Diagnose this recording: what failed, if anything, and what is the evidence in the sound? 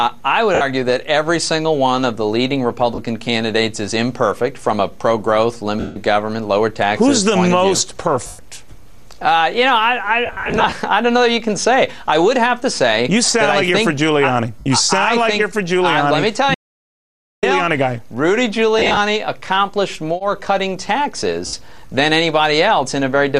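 Bluetooth link, lost LE Audio frames: brief noisy smears at 0.55, 2.95, 5.80, 8.27, 10.26–10.72, 14.59, 18.79 and 21.47 s, where LC3 concealment replays the last spectrum with scrambled signs.

Audio dropout to silence from 16.55 to 17.43 s: 0.88 s of silence with no room tone, likely a dropped input or link upstream of the recorder.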